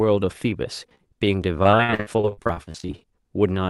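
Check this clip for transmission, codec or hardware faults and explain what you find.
There's a clear transmission problem: two bursts of repeated packet loss (robotic sound) in this speech, carried over an Opus call path that tops out around 12 kHz. The first runs from 0.42 to 1.27 s with short holes, none longer than 16 ms, patched over about 120 ms in total. The second, from 1.63 to 3.05 s, is worse. Gaps reach 64 ms and concealment covers over a third of the stretch. Each dropout gets filled by stretching the last bit of sound, so you hear choppy speech with pieces missing.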